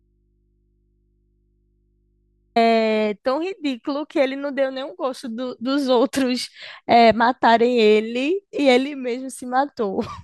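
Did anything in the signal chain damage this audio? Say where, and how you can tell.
Yes. The clip opens already inside an audio dropout to a faint residue: until 2.56 s only mains hum remains, about 45 dB below the speech, and then the signal returns abruptly. A fade would taper instead. The hum suggests a likely open analogue input or loose connection.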